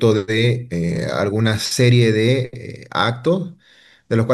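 No technical faults can be heard anywhere in this clip.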